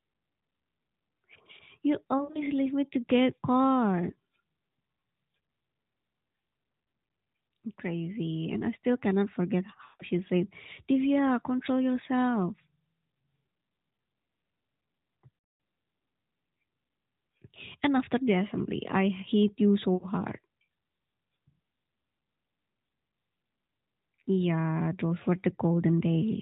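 Lost AMR speech frames occur at 2.18, 9.84, 15.38 and 19.94 s. Radio errors corrupted frames, so the narrowband decoder repeated the last good pitch and vocal tract settings with falling gain, giving drawn-out, fading warbles lasting up to 160 ms before speech returns rough.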